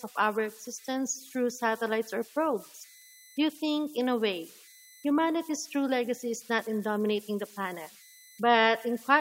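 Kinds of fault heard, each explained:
Converter idle tones: an undithered delta-sigma converter cycles into repeating bit patterns, leaving a whistle around 2 kHz, about 26 dB below the speech.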